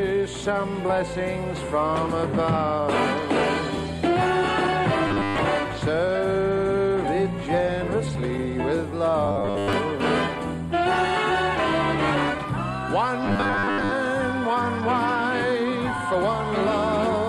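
From 5.07 to 5.38 s, 9.26 to 9.73 s and 13.26 to 13.93 s the sound turns into a rigid metallic buzz at 100 Hz: robotic sound from repeated short buffers. Audio likely arrived too late, so roughly a 10 ms chunk was looped while most of the real signal was skipped.

At 8.15 s a tiny skip is heard. This is overlap between stream segments. Two 2 s segments claimed overlapping time, so the player trimmed about 19 ms that were not actually duplicated, and the waveform jumps.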